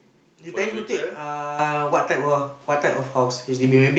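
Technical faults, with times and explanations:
1.59 s and 2.61 s, microphone volume stepped up: the speech and the background noise jump louder together in one sudden step, by about 9 dB and then about 4 dB, as the call software judged the microphone too quiet and raised its input volume.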